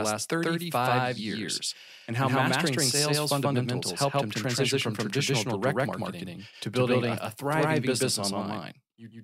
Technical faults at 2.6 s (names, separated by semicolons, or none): doubled audio track